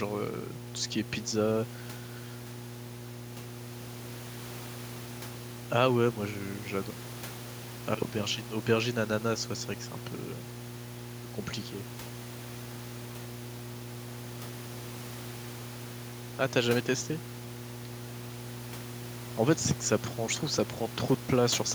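Mains hum at 60 Hz runs through the whole speech recording, strong enough to sit only roughly 10 dB beneath the talker. A ground loop or nearby transformer is leaking the power-line frequency into the signal path, giving a constant low drone that never lets up. On a spectrogram it draws an unbroken horizontal line at 60 Hz from start to end. In the waveform, pauses fill with a steady low-frequency ripple, well above the room noise at about 17 dB below the speech.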